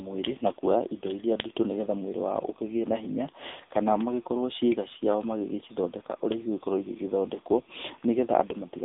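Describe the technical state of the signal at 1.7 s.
At 1.7 s you're hearing the AMR narrowband mobile codec, and it's there for the whole clip, not just this moment. The speech sits in a phone-line band of roughly 250 Hz to 3.7 kHz, with nothing above 3.8 kHz, so it sounds boxy and dull. The codec rebuilds the voice from a vocal-tract model fed by sparse pulses every few milliseconds. At this bit starvation, which fits a rate around 8 kbit/s, the damage is plainly audible as a buzzy, synthetic edge on the voice.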